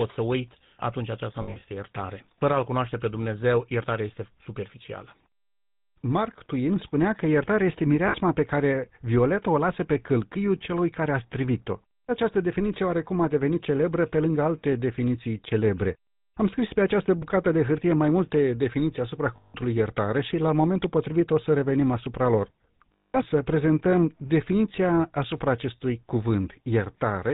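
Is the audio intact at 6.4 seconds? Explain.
No, at 6.4 seconds the speech carries GSM full-rate codec damage, as it does throughout: a buzzy, gravelly roughness and nothing above 4 kHz, consistent with 13 kbps pulse-excited vocal-tract coding rather than simple band-limiting.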